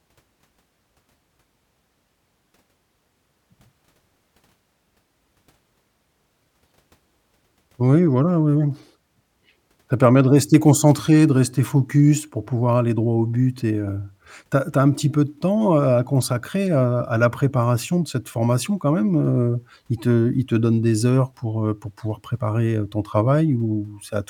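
No technical faults are audible anywhere in the recording.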